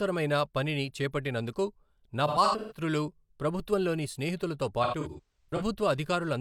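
Speech with AAC frame loss with concealment at 2.27–2.81 s, after "పనిని చేపట్టినందుకు నా", and at 4.83–5.62 s, after "ప్రభుత్వంలోని స్నేహితులతో". About 0.3 s and 0.38 s of audio are missing, scattered in runs up to around 150 ms. The decoder replays a smeared, noisy or phasey version of the last good spectrum instead of cutting to hard silence, which sets this apart from plain dropouts.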